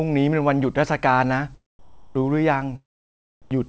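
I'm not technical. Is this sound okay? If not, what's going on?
No, not quite. From 1.79 to 2.15 s, and briefly around 3.42 to 3.51 s, the room sound turns into a flat, even hiss, a bit quieter the first time. That's comfort noise in place of the background, likely from the call pausing transmission between bursts of speech.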